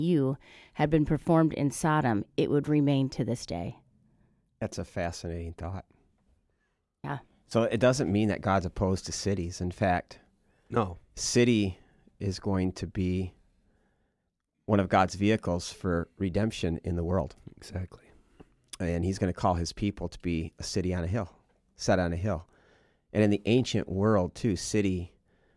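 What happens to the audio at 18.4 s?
Nothing goes wrong at 18.4 s; the speech carries on intact through that moment with no audible fault.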